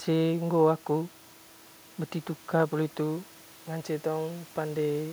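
No technical faults are audible.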